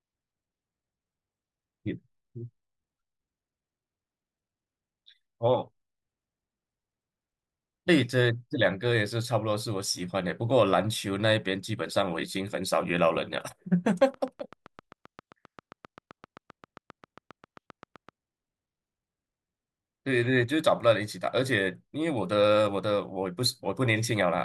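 From 13.88 s to 18.10 s a train of clicks runs over the speech: around thirty near-identical pulses at a steady 7.6 per second, peaking about as loud as the speech itself and continuing through pauses. Likely cause is electrical interference or a faulty connection or power supply.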